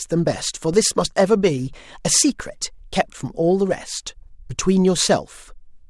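At 0.74 s there's a DC step in this speech clip: the waveform's zero line suddenly jumps by about -22 dBFS, and you hear it as a low thump under the talking. The offset doesn't hold. It bleeds away as a 20 Hz high-pass pulls the baseline back toward zero. The same thing happens again at 2.40 s, with an identical jump, thump and decay, while the speech carries straight on through both.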